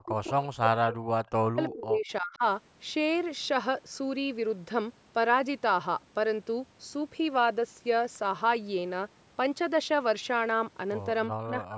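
From 0 to 2.43 s and again from 11.31 s to the end, the speech sinks by roughly 40 dB, likely speech suppressed in double talk.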